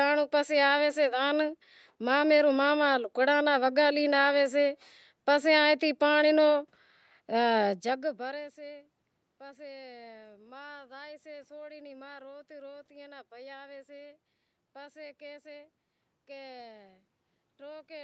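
The signal carries no technical faults: the speech sits within a band that stops at about 8 kHz, as expected from a call's microphone processing and Opus coding, with room noise underneath and a change in level near 7.5 s where the talker shifts position.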